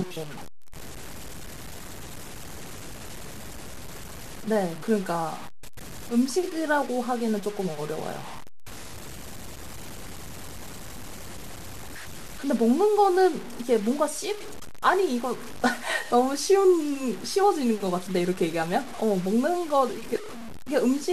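Low bit depth without dither runs throughout: the speech likely sits on about six bits, truncated, leaving grainy, signal-following distortion roughly 15 dB below it that roughens quiet syllables.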